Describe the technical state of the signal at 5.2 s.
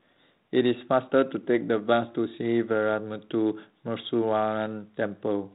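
At 5.2 s the speech is intact, with no fault present, and the G.726 ADPCM path at 32 kbit/s leaves only light codec coloration at that point.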